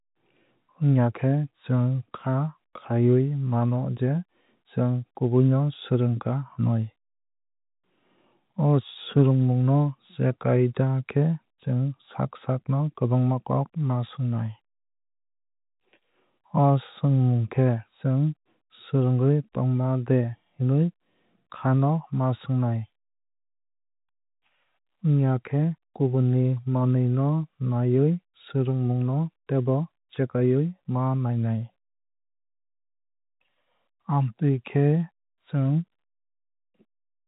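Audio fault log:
No faults found.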